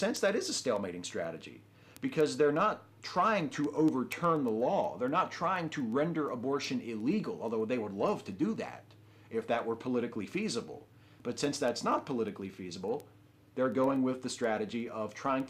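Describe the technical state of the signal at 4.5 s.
At 4.5 s the signal is in the middle of a run of word clock ticks that lasts from 0.17 s to 15.40 s. A digital link is being read by a receiver on its own unlocked clock, roughly a couple of hundred parts per million off. Each time the clocks slip, a single sample is dropped or repeated, giving sharp ticks of uneven strength about ten times a second. Unlike random clicks or crackle, they keep a steady, metronomic rate.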